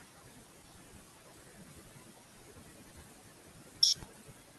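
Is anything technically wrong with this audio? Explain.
Yes. Noise suppressor artifacts run through the whole clip. The suppressor judges each frequency band frame by frame and pulls down whatever it reads as steady noise, so the room noise, about 12 dB below the speech, sinks in pauses and swells under syllables. Unlike a simple gate, it works band by band rather than switching everything on and off.

Speech cut by the noise suppressor also spans 0.0 to 4.59 s and affects nearly four seconds of it. Here the suppressor mistakes parts of the speech itself for noise and turns them down by up to about 20 dB, so those parts sound swallowed or faint. The rising and sinking background is the first fault; the swallowed, faint speech is this one.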